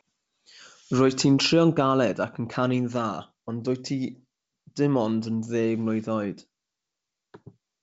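No technical faults turn up anywhere in this speech. The G.722 wideband telephone coding carries the speech up to about 7 kHz with at most a faint hiss in the upper band, which fits the full 64 kbit/s mode.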